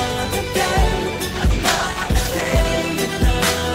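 At 1.39 s there's a call bitrate drop, lasting until about 2.71 s. The bandwidth estimate fell and the encoder got squeezed hard, and the sound turns rough and watery, with the top end muffled away. The degradation fits a fall from around 32 kbps to roughly 13 kbps, sitting at that floor for about 1.2 s. Opus codes coarsely there and trims the highs, and clarity comes back once the rate recovers.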